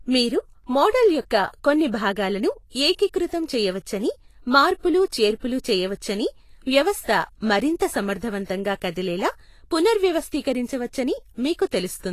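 A speech clip with Vorbis compression damage the whole way through, and it's plainly audible: the top end is hissy and grainy, consonant attacks smear, and nothing gets past 14.2 kHz. That's likely a low-quality Vorbis encode, consistent with a bitrate around 34 kbps.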